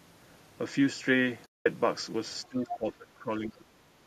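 From 1.46 to 1.66 s, AAC frame loss with muting leaves a 200 ms hole. The sound fades out and back in smoothly, unlike an abrupt dropout.

A faint second voice appears at 2.44 to 2.48 s, about 35 dB down, and again much louder at 2.69 to 2.93 s, about 10 dB below the main speech. This is likely the other side's voice leaking through from the loudspeaker past the echo canceller.

Between 2.49 and 3.88 s, the main speech sinks in patches totalling roughly a second, dropping by as much as 25 dB. This is likely speech suppressed in double talk. It shows as level dips.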